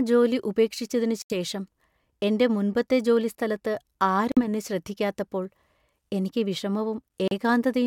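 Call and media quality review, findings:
Speech cuts to short silences at 1.22–1.32 s, 4.32–4.40 s and 7.28–7.32 s. Likely Bluetooth stall: interference delayed packets, so the headset buffer ran dry until retransmissions arrived.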